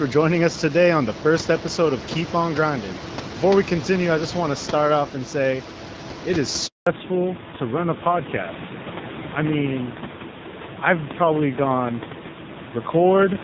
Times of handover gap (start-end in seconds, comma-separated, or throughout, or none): 6.67-6.87